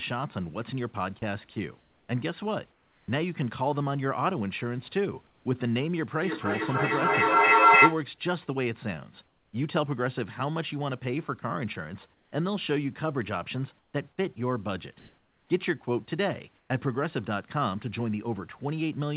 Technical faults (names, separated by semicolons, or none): comfort noise in place of the background; feedback echo between two devices